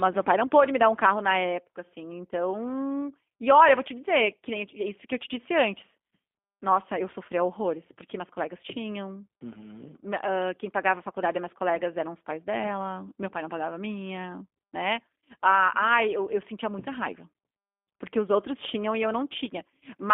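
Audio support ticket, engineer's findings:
G.729 codec in the voice path, whole clip: low-rate encoder rebuilding speech from filter, pitch predictor and sparse pulses, consistent with about 8 kbit/s. Band limited to 250 Hz–3.5 kHz; plainly rough, buzzy, synthetic texture, thin and muffled.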